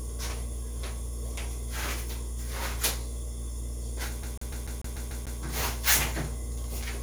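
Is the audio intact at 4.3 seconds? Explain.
No. A CD stuck on one turn runs from 4.23 to 5.40 s: a scratch keeps knocking the laser back one track, so the same 147 ms slice of sound repeats eight times, each jump marked by a brief mute, giving a fast, even stutter.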